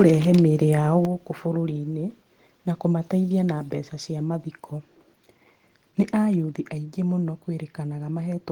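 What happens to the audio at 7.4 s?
Nothing goes wrong at 7.4 s; the speech continues intact through that moment, with no dropout, click or distortion.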